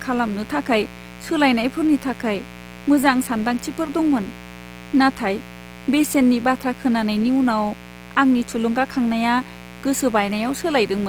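Throughout the speech, sharp switching spikes from a dimmer, rectifier or missing shield enter twice per 60 Hz mains cycle, causing a steady, raspy mains buzz with harmonics reaching several kHz, around 20 dB below the speech. Low-bitrate encoding, likely Opus compression in its CELT music mode at a rate that fits about 24 kbps, makes the speech plainly rough, noisy and grainy across the whole clip, though the bandwidth still reaches about 20.4 kHz.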